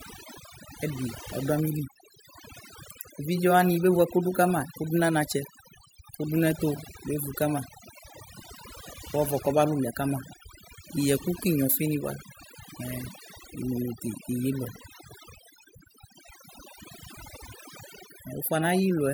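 Overdone noise removal runs throughout this speech recording. A noise reduction stage set too aggressively is shutting off individual frequency bands that sit near its noise estimate, so the background drops and breaks up into twinkling specks, and the voice's quieter components vanish too.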